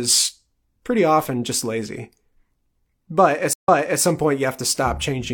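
Speech with a stream reconnect at 3.53 to 4.02 s: about 0.11 s of silence, then playback resumes 0.37 s earlier, repeating material, unlike a simple dropout.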